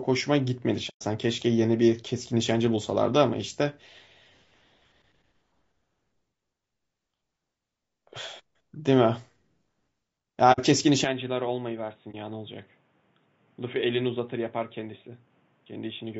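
Across the whole speech clip the voice is rough and grainy, with noise filling the gaps between harmonics and a thin, synthetic-sounding top band. That is the signature of low-delay AAC compression, likely AAC-ELD at around 32 kbps. Its very short frames blur pitch structure, so the damage is a steady texture rather than isolated events. It differs from frame loss, which leaves gaps.

AAC frame loss with muting first appears from 0.89 to 1.03 s, a hole of about 120 ms. Lost frames were decoded as silence, and the overlapping transform windows fade the sound down and back up instead of cutting it. The result is a soft-edged dropout, unlike a hard splice or a packet glitch that snaps. A shorter 60 ms hole follows from 10.52 to 10.60 s.

At 11.05 s the input switched to a poorer device, likely a different microphone or a headset call profile. There is no silence at the change. The sound abruptly turns dull and boxy, with nothing above 3.8 kHz. 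The level falls by roughly 10 dB, and a new noise floor sits roughly 35 dB below the voice. Because this shift is sudden and then stays put to the end, it stands apart from the codec's constant graininess.

Inside that narrower section, one more frame loss mutes the audio for about 30 ms from 12.11 to 12.15 s, with the same soft fade.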